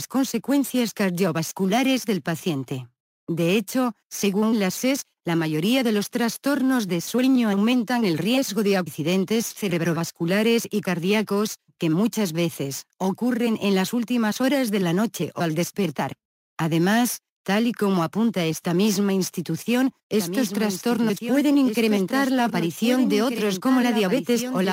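The likely cause is a second capture of the same audio through a slower path, or an edit that left two copies out of step, producing a doubled audio track from 20.18 s to the end. A full-band copy trails the original by about one and a half seconds, roughly 10 dB quieter. It switches in abruptly, with no decay or room colour. Each sound is followed by a flat, dry repeat layered over whatever comes next.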